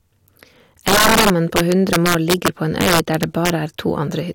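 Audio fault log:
Throughout, integer overflow: the speech is driven about 8 dB past the integer limit, so a few percent of samples on louder peaks wrap to the opposite sign instead of being held, swinging across the full range and producing violent cracks far harsher than clipping.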